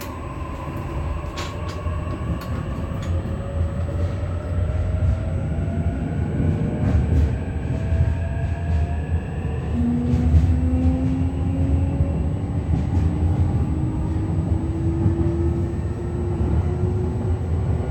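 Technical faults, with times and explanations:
Throughout, USB whine: the bus's current draw, pulsing in 125-microsecond microframes, leaks into the audio through the power or ground path, leaving a steady, fixed-pitch tone at 8 kHz that sits faintly beneath the sound, roughly 40 dB below it.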